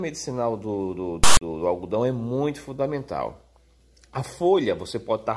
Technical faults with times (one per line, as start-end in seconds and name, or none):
1.24-1.41 file tags played as audio